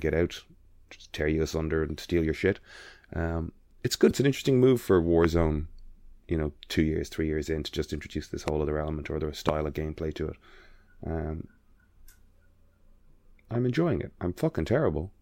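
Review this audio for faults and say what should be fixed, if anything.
Damaged data in a compressed stream occurs at 4.07 to 4.11 s, just before "an interesting move for". Corrupted bytes make the decoder misread the frames, lose sync and hunt for the next header. Re-encoding from an intact source, or verifying file checksums after transfer, would prevent this.

Loud pops occur at 5.24 to 5.26 s, right after "an interesting move for"; at 8.48 to 8.50 s, between "to just introduce this" and "other element or other"; and at 9.49 to 9.51 s. Each is a single sharp pop on top of the speech, which continues underneath. The first two peak about 15 dB above the signal and the last about 20 dB. The likely cause is a sudden voltage step, such as static discharge, a switch or a loose connector, entering the chain. Securing cables and grounding equipment before recording would prevent it.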